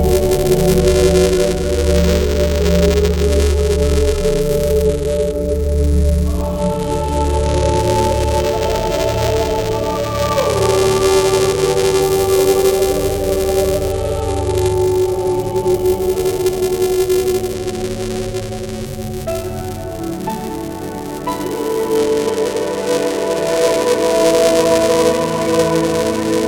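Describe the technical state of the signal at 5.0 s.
At 5.0 s the signal is inside a Bluetooth SBC bit pool drop running from 4.85 s to 7.78 s. The link has shifted to a much leaner encoding, consistent with the bit pool falling from 31 to 13 and the rate to about 94 kbps. Upper sub-bands lose their bits and the rest are coarsely quantised, so the treble dulls and gritty noise rises.

Buffer tearing is also present here, as it is throughout. The writer and reader of the playback ring buffer cross each period, splicing in a small sliver of audio roughly 10 ms stale with hard joins on both sides. This produces a steady robotic buzz at 345 Hz, which fits a 128-sample buffer.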